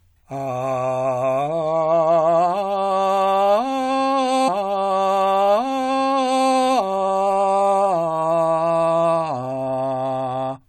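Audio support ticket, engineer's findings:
Stream segment repeated, 4.47 to 6.47 s. About 2.0 s of the music plays a second time, with a small blip at the jump back. Probable component: player buffering or segment queue. Same segment fetched or queued twice, adding about 2 s.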